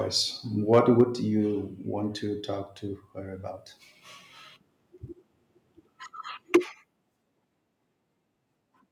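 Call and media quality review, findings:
Microphone overload, 0.73 to 1.02 s. Mic input gain likely set too high, driving peaks about 3 dB past converter full scale; a small share of samples flattened. Symptom: loudest syllables lose their tops, giving a harsh, crackling edge across that stretch.

Microphone volume stepped down, 1.01 s. Likely automatic gain control in the call client reacting to the clipped peak, cutting device input by about 4 dB in one step. Symptom: speech and background drop together, abruptly, right as the distortion ends.

Microphone volume stepped down again, 6.56 s. Likely the same mechanism: input gain lowered a further 4 dB or so in a single jump, with no overload preceding it. Symptom: sudden level drop in speech and room sound alike.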